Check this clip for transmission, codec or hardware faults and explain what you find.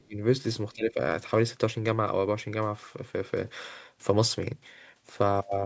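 The speech level drops sharply twice, from 0.0 to 0.2 s and from 0.74 to 0.99 s. This is most likely speech suppressed in double talk. The first dip is about 25 dB deep and the second about 20 dB, and each sounds like the voice being pulled down. The echo canceller in the call chain probably detected simultaneous far-end activity, could not separate the near talker from loudspeaker echo, and attenuated everything. The call microphone processing limits the audio to about 8 kHz, which is normal.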